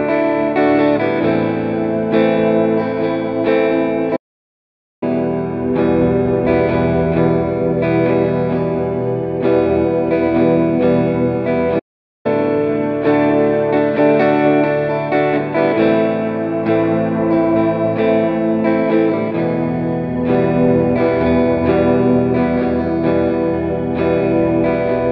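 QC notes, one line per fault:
4.16–5.03 s and 11.79–12.26 s: playback stall. The sound cuts out in mid-flow and the output falls silent, first for about 0.86 s, then for about 0.46 s. Each gap is a dead stop with no fade, not a dropout inside the audio itself. The cause is likely the player running out of buffered data or its output thread being blocked. Sound only resumes once it recovers and the buffer refills.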